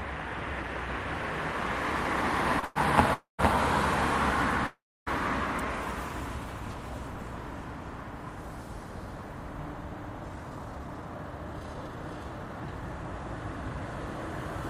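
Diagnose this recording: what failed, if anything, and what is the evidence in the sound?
Network and jitter buffer: one packet arrived late at 2.59 s, and the receiver's buffer ran dry for an instant. It stretched the last sound by 33 ms until the packet showed up, then resumed from the same point. This short stall from a late packet holds a sound slightly too long with a slight buzz or dip. Nothing is lost, but the playout delay grows by 33 ms.

Network transport again, now as a call audio freeze. Packets were most likely held up in transit, emptying the jitter buffer three times. From 2.65 to 2.78 s the receiver fills 108 ms with a fading continuation of the last sound. From 3.14 to 3.41 s it fills 250 ms, with the last 140 ms silent. From 4.67 to 5.09 s it fills 400 ms, with 290 ms of silence. Each time the audio resumes where it stopped.

Jitter buffer speed-up: the buffer held more audio than its target. 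From 10.29 to 13.04 s the receiver trims the excess by cutting out short pitch-period-sized slices over and over. The audio plays at about 114% speed without any pitch change, and about 0.4 s in total is removed. The passage sounds hurried until the delay returns to target.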